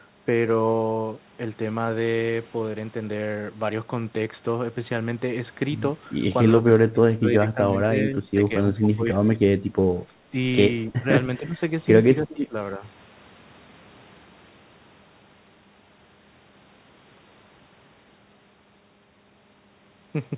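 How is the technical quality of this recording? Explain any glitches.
The recording has one recurring fault. It comes through a narrowband call path with nothing above 4 kHz, which fits G.711 mu-law at 64 kbps.

Speech suppressed in double talk occurs at 6.59–8.51, 8.74–9.46, 10.87–11.07, 11.39–11.60, 12.23–12.56 and 12.77–12.82 s. The likely cause is an echo canceller that could not tell the near talker from the loudspeaker echo while both sides spoke, so it turned everything down. The speech sinks by up to about 25 dB in the first and fifth stretches, with shallower dips of about 5 to 15 dB elsewhere.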